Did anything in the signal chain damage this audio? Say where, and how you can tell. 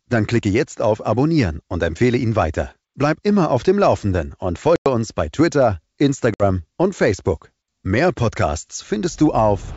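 Yes. The damage is at the network stage: packet loss on an ADPCM call. Speech drops to hard-edged silence at 4.76 to 4.87 s and again at 6.34 to 6.42 s. The gaps are about 100 ms and 60 ms, which fits roughly five and three lost packets. Because the decoder's predictor and step size drift away from the sender's during each gap, speech comes back with brief, slight distortion, as on "uns bei". The G.722 wideband coding at 64 kbit/s keeps its clear band up to 7 kHz.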